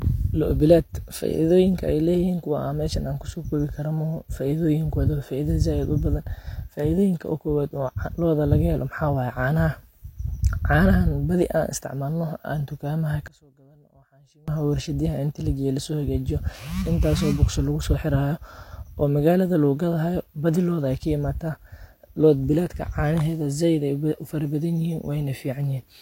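From 13.28 s to 14.48 s, one stereo channel has likely been inverted in polarity, so the two channels work against each other wherever the signal is heard summed to mono. The speech, which sits equally in both channels, cancels almost completely, and the level falls by about 28 dB for that 1.2 s stretch. What remains is only the small difference between the channels, a faint residue, before full level returns at 14.48 s.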